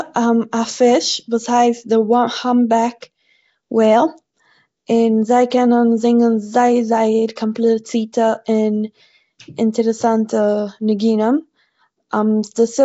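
From the start, the speech carries a rough, hissy halo and a smeared, underwater quality. Nothing is heard above 7.7 kHz. This is likely Nellymoser compression, at a rate that fits about 32 kbps. Fixed low bits leave weak bands noise-filled, and the damage is plainly audible.

Pre-echo strikes at 3.01 s, at 7.36 s just after "קענען זינגען זייער זייער", at 8.13 s and at 10.99 s. Each time, codec noise sized for a sharp attack spills backward into the quiet before it. A brief hiss of 10 to 16 ms precedes the onset, which sounds softened.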